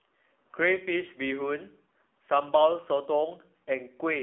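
Speech runs throughout through an AMR narrowband mobile codec: band held near 300 Hz to 3.4 kHz, with buzzy, synthetic vocal texture that fits roughly 7.4 kbps, unlike simple band-limiting.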